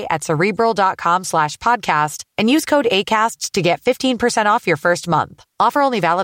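No technical faults can be heard anywhere in this speech recording.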